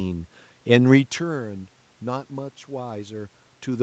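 Nothing stood out on listening to this speech clip.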